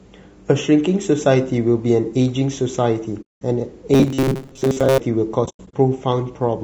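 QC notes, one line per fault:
throughout: low-delay AAC compression. The speech sounds rough and grainy, with a hissy fill between the harmonics and a top band that sounds thin and partly synthetic. This is likely a low-delay AAC codec of the AAC-ELD kind at a bitrate around 32 kbps. Its very short frames resolve the pitch harmonics poorly and use up bits quickly, so at this rate the coder lets noise into the gaps between harmonics and approximates the highs.
3.21–3.42 s and 5.45–5.74 s: AAC frame loss with muting. The first is a soft-edged hole of about 200 ms, with the sound fading out and back in. The second spreads 180 ms of loss across about 280 ms as shorter dropouts, the longest about a tenth of a second. In both, the decoder zeroes the spectrum of the missing frames, and the overlapping windows smooth the edges.
3.94–4.99 s: robotic sound from repeated short buffers. The speech turns into a rigid, metallic buzz at 134 Hz that still loosely follows the speech underneath. 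The likely cause is new audio arriving too seldom, so the player loops the last fragment, which fits a buffer of about 7.5 ms, for most of the stretch while the real audio is skipped. Each loop restarts at a fixed interval, and that repetition imposes its own pitch on the sound.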